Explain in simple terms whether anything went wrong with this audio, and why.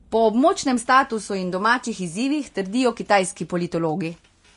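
Yes, something's off the whole way through this speech: it sounds hissy and grainy, and nothing comes through above about 10.6 kHz. That's likely Vorbis compression set too low, where the encoder trims the top end and swaps fine treble detail for rough noise.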